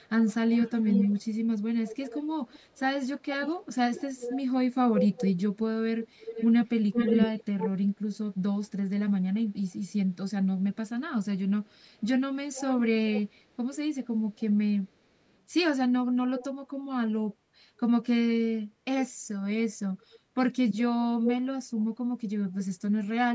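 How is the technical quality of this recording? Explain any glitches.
The main problem here is an echo leak that keeps returning through the recording. A delayed copy of the speech trails the original by about 355 ms, and it's audible across 0.0–7.69 s, 11.97–15.37 s and 21.24–22.64 s. In the first and last stretches it's only a little quieter than the speech itself, and in the middle one it drops to about 10 dB down. There are also two brief flickers, at 8.64–8.69 s (barely there, around 40 dB down) and 16.39–16.45 s (about 15 dB down). The likely cause is a far end on speakerphone whose echo canceller didn't fully scrub its microphone pickup, so the speech came back a third of a second late. You can also hear the call's mic processing trimming off the deepest bass, with nothing above 8 kHz.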